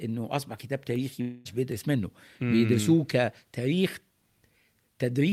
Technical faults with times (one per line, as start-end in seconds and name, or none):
1.21-1.47 long network dropout